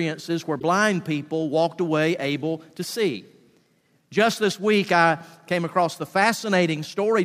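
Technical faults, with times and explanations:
0.60–0.63 s, corrupt frame decoded: a brief glitch lasting about 34 ms, roughly a couple of compressed frames' worth. Damaged bits inside those frames were decoded anyway, so misread gains and codes placed energy at frequencies where the real sound had none. On a spectrogram this is a short vertical block of misplaced energy with hard edges at the frame boundaries. The waveform shows a sudden jagged patch unrelated to its surroundings.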